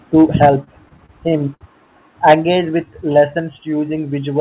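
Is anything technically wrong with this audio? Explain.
Yes. This speech recording has three kinds of technical fault.

Microphone overload occurs from 0.17 to 0.49 s and again from 2.28 to 2.34 s. The input was likely set too high, so the peaks run about 4 dB and about 6 dB past the converter's limit. Their tops are flattened, roughly a fifth of the samples in the second burst. The loudest syllables sound harsh and crackly.

Microphone volume stepped down at 0.46 s, 2.35 s and 3.40 s. The call software likely reacted to the loud input by lowering the microphone gain in single steps of about 2 dB, 4 dB and 2 dB. The level drops suddenly.

Repeated stalls (stutter) run from 0.64 to 1.63 s. Packets kept arriving late, so the jitter buffer emptied nine times. Each time the receiver stretched the last sound to fill the wait. The stalls total 187 ms, the longest lasting 61 ms, about a fifth of that span. 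No speech is lost, but it drags and stutters.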